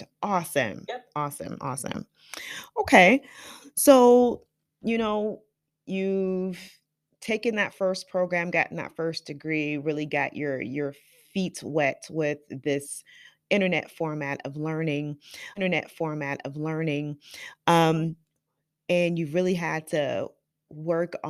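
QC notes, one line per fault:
15.55–17.55 s, stream segment repeated: just after "internet format of learning", a 2-second stretch of the speech plays a second time, so the programme runs 2 s longer than it should. There is a small blip at the point where playback jumps back. This is what happens when the player fetches or queues the same chunk of the stream twice and plays both copies in sequence, so the listener hears a clean replay rather than a stutter.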